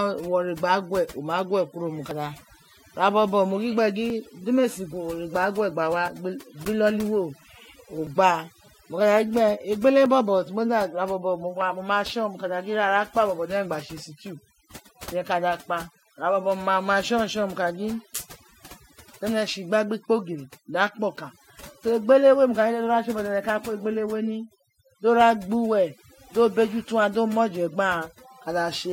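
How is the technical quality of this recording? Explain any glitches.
The recording has two clear technical problems: heavy-handed noise suppression across the whole speech clip, and a run of tiny skips early on.

Overdone noise removal runs from start to finish. The suppressor cut frequency bands near its noise estimate too deeply, taking soft parts of speech with them. Pauses fall to near silence with twinkling specks. Unlike ordinary codec smearing, the artefacts follow the noise floor.

Overlap between stream segments causes eight tiny skips at 2.11, 4.10, 6.08, 8.07, 10.06, 12.06, 14.04 and 16.03 s. Each segment boundary falls about every 2 s, where overlapping timestamps made the player discard a few milliseconds of real audio, so the waveform jumps. The strict 2-second regularity distinguishes these skips from random dropouts.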